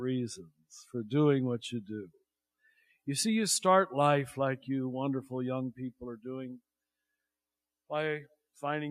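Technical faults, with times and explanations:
No technical faults detected.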